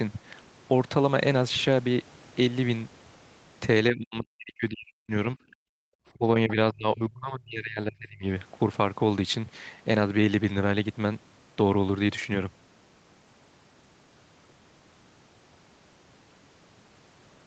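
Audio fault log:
3.91–5.11 s, 5.35–5.57 s and 6.14–8.24 s: speech suppressed in double talk, likely from an echo canceller attenuating the near talker while the far side spoke. Level sinks up to about 40 dB in dips rather than clean codec dropouts.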